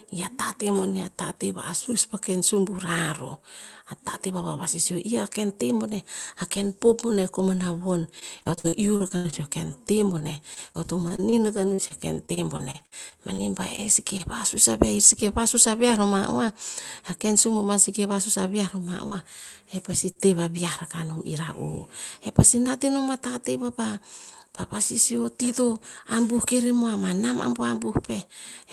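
From 8.19 to 9.34 s, 10.18 to 11.34 s and 11.74 to 13.40 s, repeated packet loss (robotic sound) makes the speech choppy. Lost packets, with gaps up to 79 ms, were patched by repeating the last sound, which shows as stretched, smeared harmonics in the spectrogram. The codec's band edge near 12 kHz stays steady throughout.

Short concealed packet loss then hits at 13.76 to 13.79 s, 14.17 to 14.21 s, 19.07 to 19.13 s and 20.11 to 20.17 s. Each is a brief smear or wobble where a 20 to 40 ms hole was filled.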